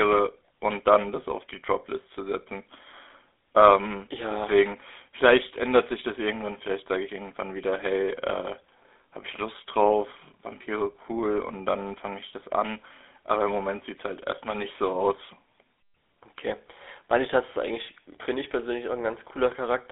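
Throughout, the speech has passed through the GSM full-rate codec, consistent with a 13 kbps mobile link. It rebuilds speech from pulse excitation, leaving a plainly audible buzzy, gravelly roughness, while the line band narrows it to about 300 Hz–3.6 kHz, with nothing above 3.8 kHz.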